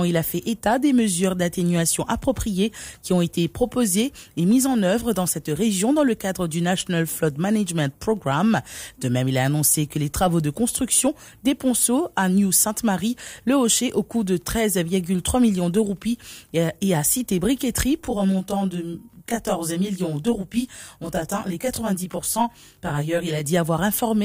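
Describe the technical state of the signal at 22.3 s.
At 22.3 s there is channel delay (comb filtering), running from 18.05 to 23.45 s. One channel lags the other by around 20 ms, and when they are summed to mono, repeating notches starting near 20 Hz make the sound rough and slightly doubled.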